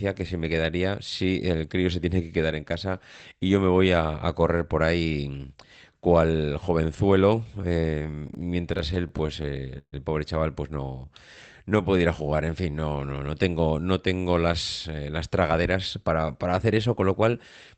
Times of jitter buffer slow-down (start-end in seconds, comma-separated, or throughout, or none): 11.05-13.13